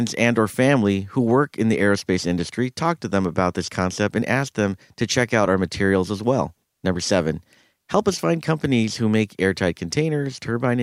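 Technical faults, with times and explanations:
No technical faults detected.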